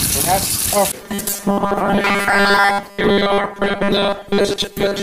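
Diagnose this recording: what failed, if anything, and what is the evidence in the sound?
From 1.01 s to 5.03 s the sound turns into a rigid, metallic buzz at a fixed 200 Hz, a robotic sound from repeated short buffers, and it follows the original only roughly. This points to a starved driver or buffer stage, likely one that repeats a 5 ms block whenever fresh audio arrives late, so that most of the real material is skipped. A codec fault would smear or warble the sound instead. This buzz stays locked to one rate regardless of the content.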